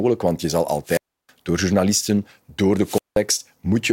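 Speech, broken twice by a wireless microphone squelch dropout. After "want je zal", at 0.84 s, the sound gives way to a short rise of hiss before the output goes nearly silent for about 318 ms, returning by 1.30 s with "door journalisten door". The same thing happens again from 2.81 s to 3.20 s, with a mute of about 183 ms. Each time, the FM carrier faded far enough that the receiver's squelch cut the audio.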